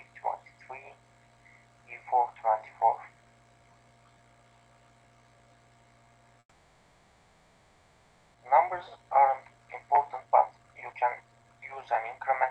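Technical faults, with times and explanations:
6.39–8.36 s, call audio freeze: the sound stalls for about 1.95 s, the last bit stretching into a fading buzz with a brief dip to silence, then carries on exactly where it left off. Nothing's lost, but everything after runs late, likely from packets held up in transit.
8.52–11.77 s and 12.18–12.45 s, jitter buffer speed-up: the audio plays fast at unchanged pitch, around 124% and then 119%, because the receiver snips out tiny pitch-period slices to cut the built-up delay. About 0.7 s goes in the first stretch, much less in the second.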